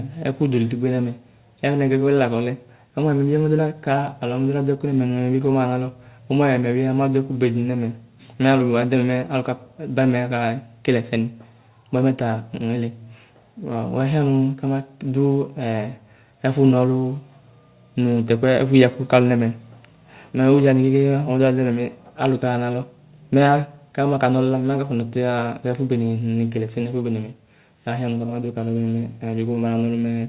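Speech, with no technical faults to report.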